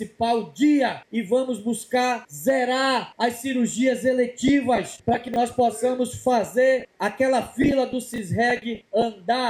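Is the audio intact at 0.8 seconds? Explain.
Yes, the audio is intact at 0.8 seconds, with no dropout, click, distortion or other fault at that moment.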